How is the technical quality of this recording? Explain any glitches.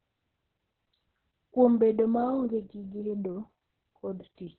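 Quality's pretty rough, heavily compressed throughout. Opus voice compression is squeezing it into narrowband, with nothing above about 4.3 kHz, so the speech sounds muffled, hoarse and a bit robotic, which fits roughly 6 kbps SILK coding.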